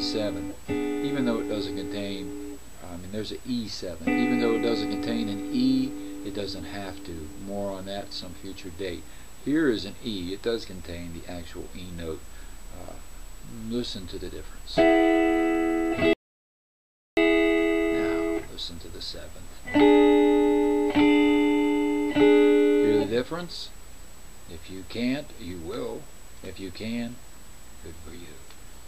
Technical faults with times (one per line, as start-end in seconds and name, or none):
16.13-17.17 audio dropout to silence